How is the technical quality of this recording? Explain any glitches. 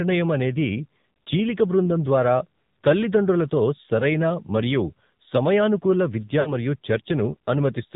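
Poor: the whole recording sounds band-limited and buzzy, with one brief dropout near the end.

Throughout, the speech has a muffled, telephone-like quality with a buzzy, synthetic edge. That is the AMR narrowband mobile codec. It keeps nothing above 4 kHz and rebuilds the voice from a coarse vocal-tract model, and the plainly audible roughness fits a low mode around 7.4 kbps.

From 6.40 to 6.55 s, right after "సరైన మరియు సమయానుకూల విద్య", the sound smears and sags briefly before recovering slightly rough. These are lost AMR speech frames. The decoder filled roughly 60 ms, which fits three missing frames, by repeating its last good settings at falling gain.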